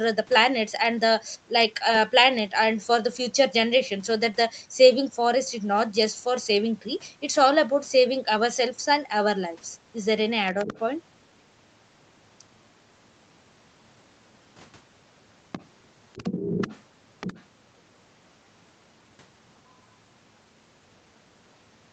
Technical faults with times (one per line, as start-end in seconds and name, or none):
10.51-10.80 other side's voice leaking through
15.52-15.68 other side's voice leaking through
16.14-16.79 other side's voice leaking through
17.20-17.43 other side's voice leaking through